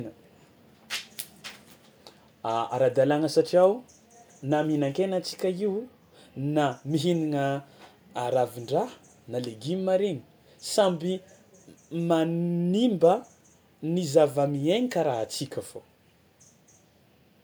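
Speech recording with no audible technical fault anywhere in the clip.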